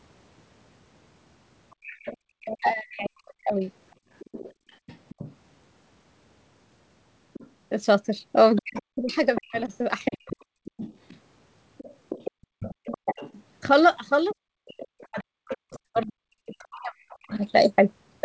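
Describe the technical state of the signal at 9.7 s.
Other side's voice leaking through, 7.33 to 17.35 s: a second voice sits roughly 15 dB under the talker, likely loudspeaker echo the canceller failed to remove. Speech suppressed in double talk, 8.61 to 10.3 s: the talker's level drops in pieces by as much as about 40 dB, under a second in total, likely because the canceller turned down both voices when they overlapped.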